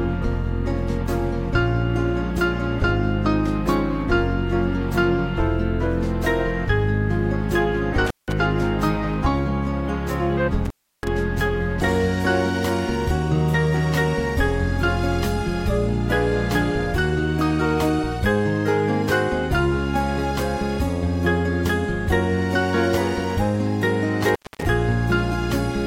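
The sound drops out abruptly with a crackle at each edge at 8.06 s for about 0.18 s, at 10.65 s for about 0.33 s, and at 24.29 s for about 0.24 s. This is intermittent contact: a loose plug or cable briefly opening the signal path.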